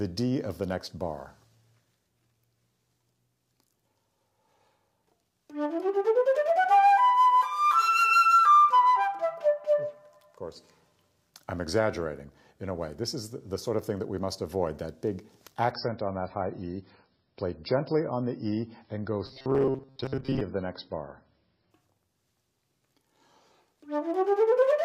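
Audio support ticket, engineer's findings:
Adaptive stream at a lower bitrate, 15.71–21.71 s. Sudden switch to dull, smeared sound with swirly artefacts, which fits a fall from 128 to 16 kbit/s MP3. Unlike a dropout, there is no gap and quality snaps back at 21.71 s.

Robotic sound from repeated short buffers, 19.26–20.42 s, inside the low-bitrate stretch. Rigid metallic buzz at 133 Hz that still follows the sound's contour, likely buffer underrun looping a roughly 7.5 ms block, with most of the real audio skipped. Unlike the bitrate drop, this adds a fixed pitch rather than removing treble.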